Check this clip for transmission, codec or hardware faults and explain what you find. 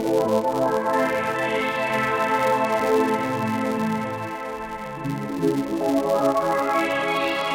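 The music carries one fault. A filter restarted on every block runs throughout: the filter drops its stored state at each block boundary and starts from silence, leaving a small transient every 5 ms. This is heard as a 200 Hz buzz that rises and falls with the music's level.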